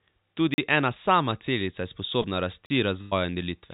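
At 0.54 s the speech drops into a block of digital silence lasting 40 ms, ending at 0.58 s just before "ena sama". A run of samples dropped to silence, most plausibly because the output buffer was not filled in time. The cut in and out has no fade, leaving a short dead hole. Unlike packet loss, nothing fills the gap, and the abrupt edges mark a hard switch to silence.

At 2.22 s comes a short concealed packet loss. About 20 ms of audio never arrived in time, and the receiver covered the hole with roughly 16 ms of synthesized continuation, extrapolating the preceding sound before blending back by 2.26 s. It is heard as a brief smear or wobble rather than a click. There is no true silence, which separates it from the zeroed blocks around it.

At 2.66 s a second block of digital silence, again 40 ms, runs to 2.70 s. It has the same abrupt edges framing an empty gap.

From 3.02 to 3.13 s a burst of packet loss removes about 100 ms of signal. 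Concealment stretches the last sound for nearly all of that span and lets it fade, so it comes across as a held, decaying buzz or hiss. The speech then resumes further along with the intervening piece gone. The length and the fading fill tell it apart from the brief 2.22 s smear.

Throughout, nothing above 4 kHz is present, which fits a G.711 mu-law call path at 64 kbps.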